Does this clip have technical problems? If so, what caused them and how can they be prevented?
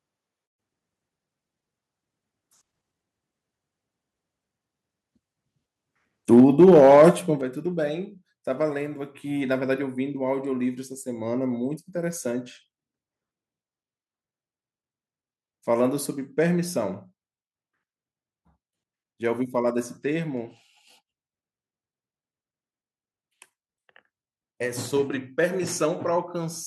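Yes. Microphone overload from 6.32 to 7.09 s: the loudest peaks are flattened at the converter's ceiling, roughly 7 percent of samples in that stretch, giving a harsh, crackling edge. The likely cause is input gain set about 4 dB too high for those peaks. Lowering the microphone's input level, or keeping more distance from it, would leave headroom for loud syllables.

Microphone volume stepped down at 6.40 s (about 3 dB), 7.41 s (about 7 dB) and 16.02 s (about 1 dB): the voice and background drop abruptly together each time, with the first two coming during and just after the distorted passage. This is likely the call software's automatic gain control cutting the device input after detecting clipping. Disabling automatic microphone adjustment and setting a safe fixed level would prevent these jumps.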